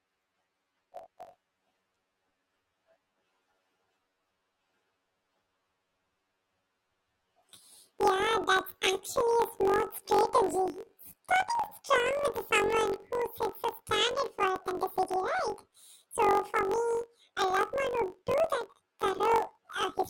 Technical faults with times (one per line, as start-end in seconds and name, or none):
0.00-20.09 planar audio read as interleaved